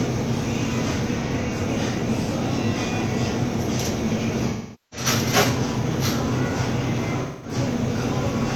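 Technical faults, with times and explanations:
1.20–1.56 s AAC frame loss with concealment: compressed audio frames went missing in short bursts over about 340 ms, the longest around 40 ms. The decoder patched each gap from the last good spectrum, giving brief smeared, noisy flickers.
4.49–5.07 s AAC frame loss with concealment: about 430 ms of coded audio was lost, which points to roughly ten dropped frames. Extending the previous spectrum this long makes the concealment decay to a very faint noise floor before the sound fades back in.
7.22–7.54 s AAC frame loss with concealment: about 213 ms of data was lost. The decoder refilled it from the earlier spectrum, producing a short noisy, blurred patch.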